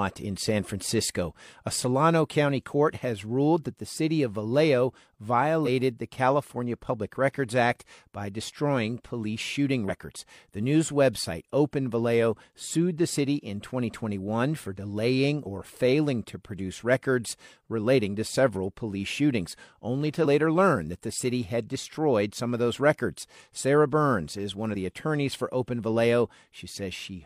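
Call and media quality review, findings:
Damaged data in a compressed stream, speech track. Three short blips at 5.62–5.68 s, 9.85–9.90 s and 15.42–15.47 s, each about 50 ms. Probable component: the compressed stream or file feeding the decoder. Mechanism: corrupted bytes make the decoder misread those frames and lose sync. It then hunts for the next valid frame header. The garbled output lasts until sync returns.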